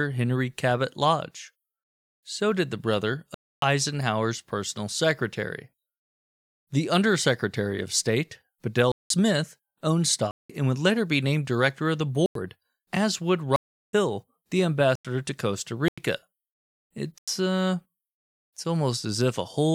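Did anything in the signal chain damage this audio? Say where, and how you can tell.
Yes. The damage is at the driver or buffer stage: repeated blocks of digital silence in the speech. Hard dropouts land at 3.34 s (after "did the brother", about 0.28 s), 8.92 s, 10.31 s, 12.26 s (after "named director of the", before "as would"), 13.56 s (after "as would", about 0.37 s), 14.95 s, 15.88 s and 17.18 s. Each cuts cleanly to silence and back. Most last about 0.09, 0.19 or 0.37 s, which fits whole blocks of 4096 samples. The output buffer likely wasn't filled in time.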